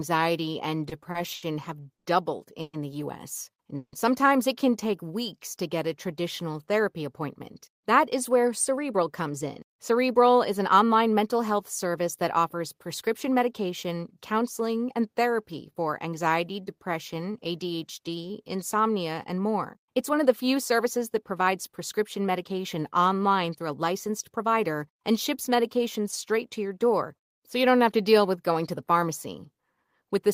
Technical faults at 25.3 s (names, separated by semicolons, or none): none